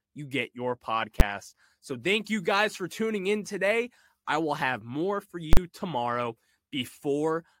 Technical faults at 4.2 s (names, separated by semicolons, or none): none